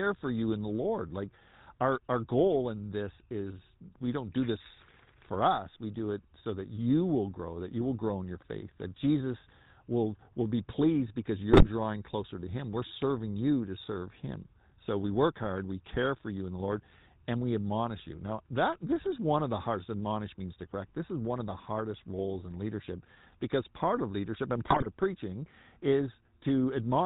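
The whole recording carries GSM full-rate codec coloration: a buzzy, gravelly roughness, with the damage plainly audible, in line with the 13 kbps full-rate coder. The codec models the voice as a filter driven by a regular pulse train, so fine spectral detail is replaced by a coarse, decimated excitation. On a spectrogram everything stops sharply at 4 kHz, and the harmonics look smeared and grainy rather than cleanly striated.

GSM bit errors break in twice. From 11.5 to 11.69 s, between "will be pleased because" and "closer to", corrupted filter, pitch and gain parameters make the speech squawk and gargle. The burst fits nine consecutive 20 ms frames, and the error rate there points to about 5 percent. A second, milder burst runs from 24.68 to 24.88 s, between "part of leadership and" and "of preaching". On the waveform these show as sudden level jumps. On the spectrogram they appear as blotchy, misplaced formant energy.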